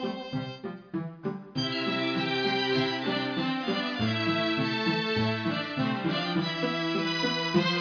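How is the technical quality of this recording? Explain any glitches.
No glitches or faults are audible.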